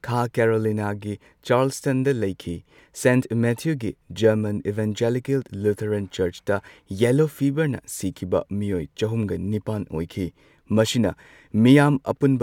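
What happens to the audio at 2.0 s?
At 2.0 s the audio carries on intact, with no dropout, click, distortion or other fault at that point.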